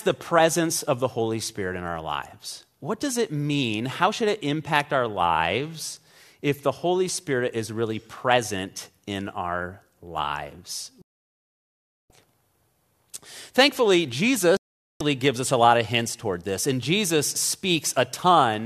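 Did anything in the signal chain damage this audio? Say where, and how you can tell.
Yes: a digital broadcast dropout at the receiver. The speech mutes abruptly, with a fade of about 3 ms, from 11.02 to 12.10 s and 14.57 to 15.01 s, after failed frames.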